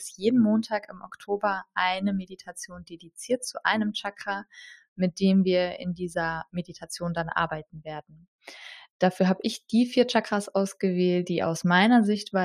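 A speech-style noise suppressor has been left running on material it wasn't built for, treating steady tones, ambience and tails as noise and pulling them down. The level keeps swinging by something like 15 dB, so the whole clip pumps and thins out while sharper onsets still punch through. You can hear the suppressor clamp down on particular stretches, cutting held sound and decays: 0.65 to 1.65 s (about 19 dB down at worst), 1.94 to 3.17 s (about 19 dB), 3.85 to 4.55 s (about 17 dB), 5.78 to 6.06 s (about 14 dB), 6.52 to 6.89 s (about 19 dB) and 7.61 to 8.27 s (about 19 dB).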